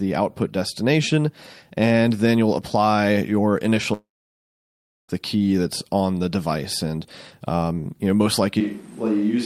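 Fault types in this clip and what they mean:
Long network dropout: The stream most likely stopped delivering audio from 3.93 to 5.10 s, losing about 1.16 s. The receiver briefly stretches the last sound into a fading buzz or hiss, then leaves roughly a second of near silence before the speech resumes at "the key that's on", with the missing part skipped.
Switch to a distant microphone: After "um you know most", at 8.61 s, the recording likely drops the close microphone and picks up one further away. The speech abruptly turns roomy and hollow, thinner in the bass, a few decibels quieter, with faint background room noise, and stays that way to the end.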